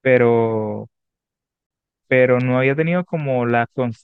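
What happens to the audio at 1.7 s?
At 1.67 s the speech drops into a gap of about 39 ms, ending at 1.71 s. This is a gap at a join of encoded pieces: separately encoded segments were butted together untrimmed, leaving encoder delay and final-frame padding. The edges are smeared by the codec, and the speech resumes where it stopped.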